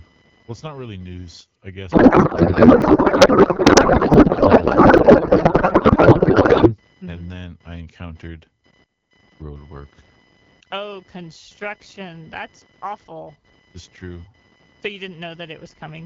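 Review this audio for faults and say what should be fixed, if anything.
A faint computer activity noise buzz, pulsing at roughly 1 kHz and well below the speech, runs throughout. It comes from processor and peripheral load disturbing the audio ground and shows as a thin comb of horizontal lines across the spectrogram. Isolating the audio interface's ground from the computer, for example with a USB isolator or ground-loop breaker, would prevent it.

From 1.91 to 6.77 s, a codec payload misread turns speech into garbled warble. Octet-aligned AMR frames are being unpacked as bandwidth-efficient, so the spectrogram shows smeared noise unrelated to the speech's formants. Matching the octet-align setting on both ends of the call would prevent it.

Small jumps forward in the sound occur at 2.82, 4.14 and 4.98 s. About 20, 40 and 20 ms are lost, likely from a dropped buffer (overrun). Each appears as a step discontinuity in the waveform and a thin vertical streak on the spectrogram. 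Larger buffers or higher priority for the audio thread would prevent these overruns.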